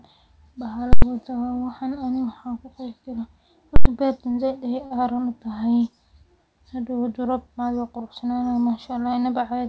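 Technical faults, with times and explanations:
0.93–1.02 s and 3.76–3.85 s, invalid numbers at full scale: Twice a block of about 93 ms (consistent with a 4096-sample processing block) is replaced by infinite or invalid values, which get forced to the maximum positive or negative sample value. The output sticks flat at one extreme value, far beyond the speech's peaks, for that block. The sudden jump to that extreme and the drop back out give very loud pops at both edges, with no sound in between.
4.32–4.35 s and 4.86–4.92 s, short stall from a late packet: Each time, a packet arrives late and the jitter buffer on this G.722 call path runs dry. The receiver fills the gap by stretching the last sound, about 17 ms the first time and 48 ms the second, then resumes exactly where it stopped. Nothing is lost. Instead a sound hangs on slightly too long, with a faint buzz or dip, and playback ends up that much later than before.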